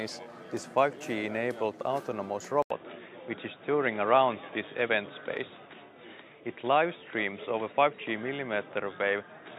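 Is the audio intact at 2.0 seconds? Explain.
Yes, the audio is intact at 2.0 seconds, with no dropout, click, distortion or other fault audible at that point.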